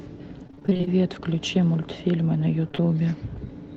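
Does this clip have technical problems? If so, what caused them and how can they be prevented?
Yes. From 0.47 to 0.89 s there is repeated packet loss, heard as robotic sound. Eleven gaps cut into this stretch, the longest about 26 ms. Each gap was patched by extending the last bit of sound. Then the next gap arrived before the audio could recover. Nearly half of the span is made-up fill. The result is choppy, with pieces missing. Prevention: use a steadier network link, or enable forward error correction and a deeper jitter buffer.

Around 2.69 to 2.82 s there is short concealed packet loss, in three close events: 2.69 to 2.82 s, 2.72 to 2.75 s, and 2.75 to 2.80 s. Each hole is only tens of milliseconds long. The receiver covered each one by continuing the preceding sound, then blended back into the real signal. A little extra time crept in. You hear a brief smear or wobble, and a short sound may be lost. 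Prevention: reduce network jitter and loss, for example by using a wired connection instead of congested Wi-Fi.

The call codec's band limit, near 8 kHz, is audible as a dulled top end.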